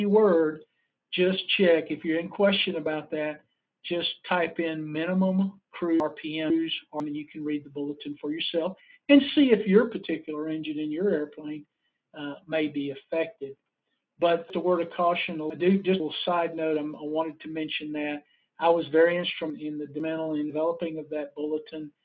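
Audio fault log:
6.0–7.0 s, 14.5–16.0 s, 19.5–20.5 s: chunks out of order. The audio here moves in 500 ms blocks, and one block plays late. At 6.0 s and 19.5 s it is one block late. At 14.5 s it is two blocks late, so the disorder spans 1.5 s. No audio is missing, but the sequence jumps backward and forward. Each event has three hard joins, which are heard as a jumbled stretch.
8.75–8.98 s, 18.21–18.59 s: sound cut by the noise suppressor. At both points the suppressor treated wanted sound as noise and pulled it down more than its surroundings, for around a fifth of a second each time. The level sinks by about 10 dB at the first point and by about 16 dB at the second. Steady or decaying parts of the sound dip or end abruptly. The call microphone path, which passes nothing above 8 kHz, is not part of this fault.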